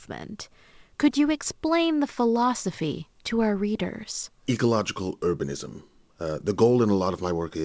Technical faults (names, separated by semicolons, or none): none